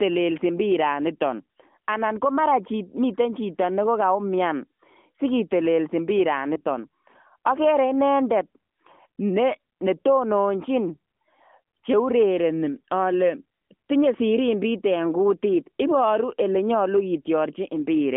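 At 6.54 to 6.61 s, just after "sikitelesi mpiraan", there is a lost AMR speech frame. The gap fits a single 20 ms frame that failed its checksum over the radio link. The decoder filled it by reusing the previous pitch and vocal tract settings at reduced gain, so the speech briefly dips or warbles rather than going silent, then recovers slightly rough. On a waveform this is a short amplitude sag. A spectrogram shows the harmonics smearing flat for that instant, all within the narrowband AMR-NB channel's 200 Hz to 3.4 kHz band.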